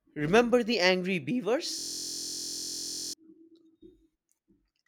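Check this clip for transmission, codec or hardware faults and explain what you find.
One hardware fault: a system hang loop from 1.79 to 3.14 s. The driver stalled while the output kept replaying a 23.2 ms buffer, producing a 43 Hz buzz.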